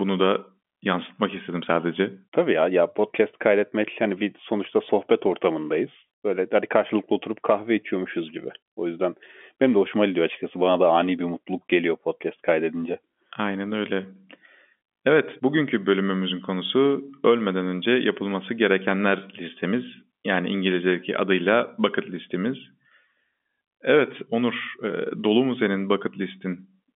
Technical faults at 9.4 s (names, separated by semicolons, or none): none